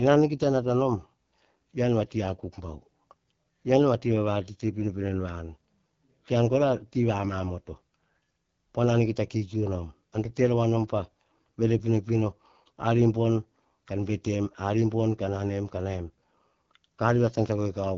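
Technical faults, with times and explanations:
Throughout, AMR wideband (HD Voice) codec: rough, raspy speech that points to a low rate near 8.85 kbit/s; the spectrogram shows smeared harmonics and a hard ceiling at 6.7 kHz.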